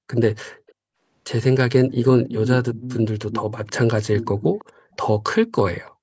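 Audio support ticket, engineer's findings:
Background gated by the echo canceller, 0.52 to 0.67 s: room tone ducks hard, about 40 dB down, for roughly 150 ms while the far-end speaker plays. Canceller's suppressor clamping the mic, then releasing.

Echo leak at 0.67, 1.88, 2.22 to 2.56, 2.74 to 3.01, 3.3 to 3.78, 4.16 to 4.96 and 5.87 s: delayed copy of the speech, 336 ms behind, faint at the edges, only about 10 dB down mid-clip. Likely residual loudspeaker pickup the canceller missed.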